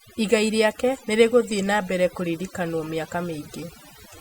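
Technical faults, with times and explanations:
Throughout: overdone noise removal. The noise reduction was pushed too hard, so frequency bands close to its noise estimate get pulled way down or cut out entirely. The background drops and breaks up into little twinkling specks, and the quieter parts of the speech vanish too.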